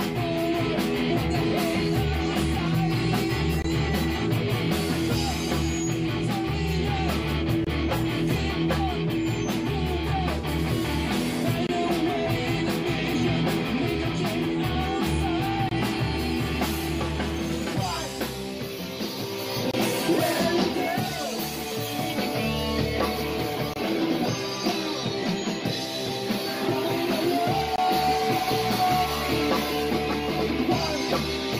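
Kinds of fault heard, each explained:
Gap at a join of encoded pieces: separately encoded segments were joined untrimmed, leaving each encoder's start delay and end-frame padding as silence. Seven dropouts of about 22 to 23 ms, with smeared edges, recur every 4.0 s from 3.62 s to 27.78 s.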